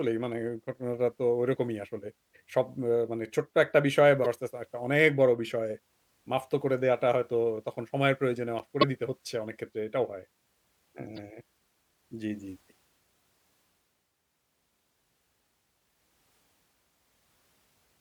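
Damaged data in a compressed stream at 4.22–4.26 s, 8.81–8.84 s and 11.16–11.19 s: corrupted frames make the decoder lose sync, leaving brief glitches in the speech.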